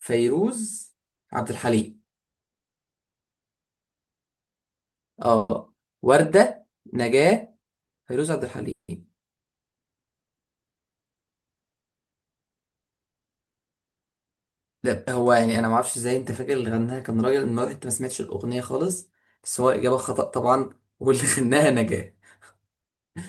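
At 5.37 s a call audio freeze interrupts the speech. Packets were likely held up in transit, so the jitter buffer ran dry. The receiver stretched the last sound into a fading buzz for about 120 ms. Then the speech resumes where it stopped. Nothing is lost, but everything after it now runs 120 ms later.

A second freeze comes at 8.71 s and lasts until 9.02 s. Again, the cause is likely delayed packets. This time the fill runs longer, about 170 ms. The held sound decays, and about 120 ms of it is plain silence before the speech returns. The delay grows by another 170 ms.

From 19.37 s to 19.92 s there is a jitter buffer speed-up. The buffer had built up more audio than it needed. To trim the excess, the receiver cut many short pitch-period slices, removing about 50 ms in total. The speech runs at 107% speed with its pitch unchanged, so the passage sounds slightly rushed.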